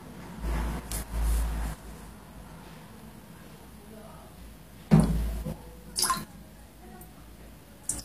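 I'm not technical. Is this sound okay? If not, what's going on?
No. Throughout, the treble sounds gritty and metallic, with nothing above 15 kHz, likely from HE-AAC compression, which rebuilds the top end from copied lower frequencies.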